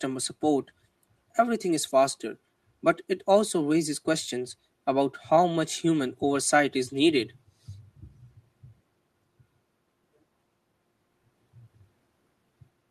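Nothing is technically wrong with this speech recording.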